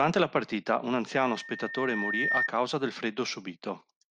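From 1.12 s to 2.49 s a loudspeaker feedback squeal rises over the speech. The microphone is picking up the loudspeaker it feeds, and at 1.8 kHz the loop gain passes one, so that frequency keeps feeding itself. Unlike a steady electrical whine, which sits at a fixed level from the start, this tone swells over roughly a second until it stands a few decibels above the speech.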